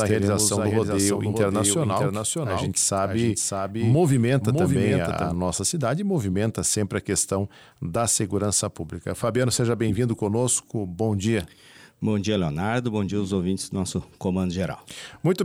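From the first moment until 5.34 s the audio carries a doubled audio track: a full-band copy trails the original by roughly 0.7 s at around 5 dB lower, likely from a second, slower capture path, showing as repeated offset waveform shapes that cut off abruptly.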